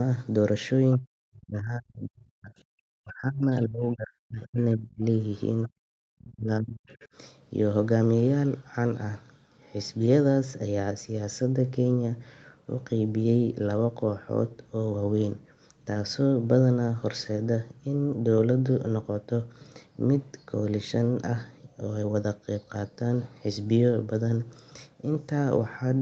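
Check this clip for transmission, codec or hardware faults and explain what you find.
Two related echo-canceller faults cluster in the first seven seconds of this speech, with all audio band-limited to 8 kHz by the call path.

Other side's voice leaking through: brief scraps of a second voice at 0.92–0.98 s, 3.56–3.62 s, 5.63–5.68 s and 6.87–7.07 s, faint at roughly 25 to 35 dB below the talker. The likely cause is loudspeaker sound the echo canceller failed to subtract from the microphone. The scraps land right at the edges of the dips described next. That timing separates them from room reverb, which would trail the talker's own voice.

Speech suppressed in double talk: the talker's voice sinks by as much as about 40 dB at 0.99–2.52 s, 2.99–3.46 s, 3.65–5.04 s and 5.68–6.88 s. During these stretches it drops away or comes through in broken pieces. This is likely the canceller treating overlapping speech as echo and turning everything down. 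Packet-loss dropouts are abrupt gaps of a few tens of milliseconds, and automatic gain pumping rises and falls smoothly. These dips instead last up to one and a half seconds and line up with the leaked far-side voice.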